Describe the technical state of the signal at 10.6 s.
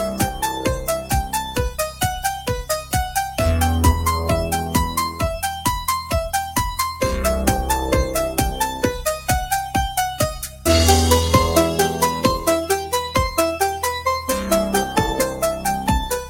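At 10.6 s you're near the end of a stretch, from 10.34 to 10.66 s, where sound is cut by the noise suppressor. It mistook this sound for noise and pulled it down by up to about 10 dB, so the steady part sinks and its tail gets clipped off early.

That sits on top of a wider problem: a noise suppressor applied to music or sounds, left running the whole time. It keeps treating held sound and ambience as noise, swinging the level by roughly 10 dB, so things pump and thin out while sharp onsets still punch through.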